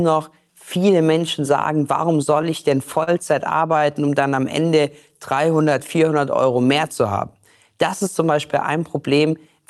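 Right after "sagen warum", from 2.32 to 3.09 s, you get repeated stalls, a stutter. Packets were turning up late, so the jitter buffer kept running dry and the receiver had to stretch out the last bit of sound to cover. It happens five times, adding 72 ms in all, with the longest hole only 37 ms, so nothing actually drops out. It just catches and drags in little hiccups.

Then from 3.79 to 6.26 s there's a jitter buffer slow-down. The buffer was low or had just raised its target delay, so the receiver built up a cushion by repeating single pitch periods and slivers of pauses over and over. That adds 147 ms and takes the speech down to about 94% speed. The pitch stays put, so it comes across as a slightly lazy, drawn-out stretch rather than anything sounding lower.

Last, just after "ist zum", from 8.30 to 9.59 s, it flips into a jitter buffer speed-up. Too much audio had piled up, so the receiver trimmed out pitch-period-sized chunks, roughly 70 ms in total, to pull the delay back down. 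Playback runs at about 105%, again at the same pitch, and that tail end sounds a touch rushed. Throughout, the call path's Opus codec, running at 48 kbps, tops out around 12 kHz.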